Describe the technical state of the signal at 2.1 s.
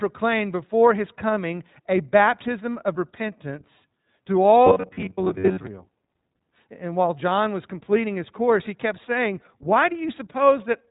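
At 2.1 s you're hearing the iLBC codec artefacts that run through the whole clip. Nothing above 3.8 kHz survives, and because each frame is coded on its own (the sound fits the 20 ms, 15.2 kbps mode), the speech has a plainly audible rough, synthetic edge.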